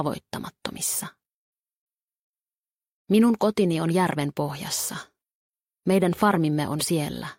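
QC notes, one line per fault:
Nothing stood out on listening to this audio.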